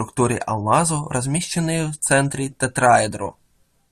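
Listening to the speech recording, nothing stood out as a technical problem.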